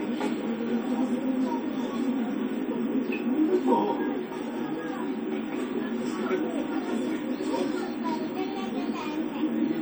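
A recording of sounds with generation loss throughout: a swirly, hollow, smeared texture with blurred attacks, more damaged than a single lossy pass would leave. The likely cause is repeated MP3 re-encoding, around seven passes, consistent with a 64 kbit/s chain.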